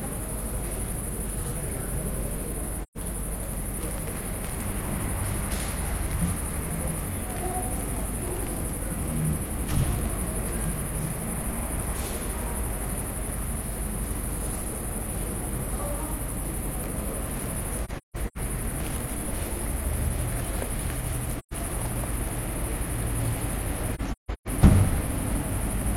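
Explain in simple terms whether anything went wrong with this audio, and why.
The sound drops out at 2.80, 17.84, 21.36 and 23.92 s. This is AAC frame loss with muting: missing blocks of coded audio became silence, faded in and out softly. The first and third gaps last 0.13 s. At 17.8 and 23.9 s, several short holes spread over half a second.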